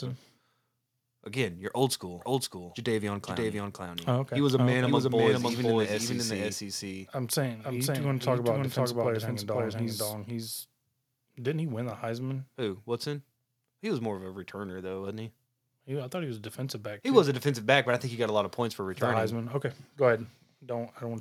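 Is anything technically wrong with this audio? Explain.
Yes. From 2.21 s to 11.91 s the speech has a doubled audio track. A second full-band copy at roughly equal level trails by about half a second. It is likely captured twice through a slower path. It sounds like a dry, roomless echo that starts and stops abruptly. On a waveform or spectrogram, every syllable's pattern repeats about 0.5 s later.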